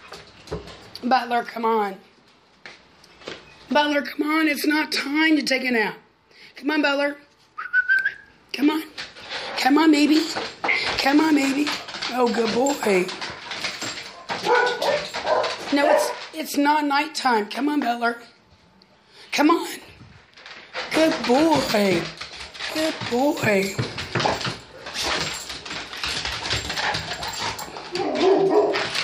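No technical faults are audible.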